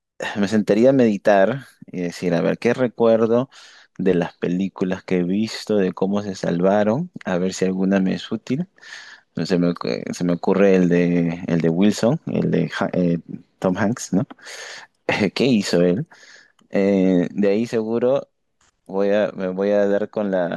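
No technical faults can be heard anywhere in this speech recording. Nothing in the audio needs a time-stamped description.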